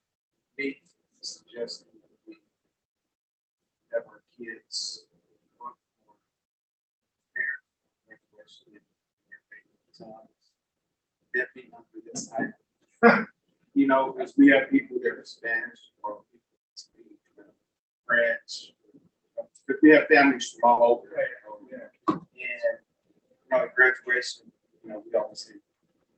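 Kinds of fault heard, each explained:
Short concealed packet loss: Around 20.73 to 20.79 s, about 40 ms of the stream did not reach the decoder in time. The receiver covered the gap by carrying the preceding sound forward. It followed the pitch where the sound was voiced and used shaped noise where it was not. It then blended back into the real audio. The result is a brief smear or wobble there, heard through the call codec's band limit near 8 kHz.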